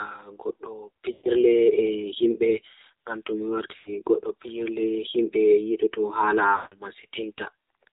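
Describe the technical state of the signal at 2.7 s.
At 2.7 s the speech is passing through AMR narrowband mobile codec coding, which runs through the whole clip rather than starting at that moment. The codec resamples to 8 kHz and rebuilds the voice from a vocal-tract model fed by a few pulses per 5 ms subframe, so the speech sounds plainly buzzy and synthetic, which fits a low-rate mode near 7.4 kbps. A spectrogram shows a hard ceiling at 4 kHz with nothing above it.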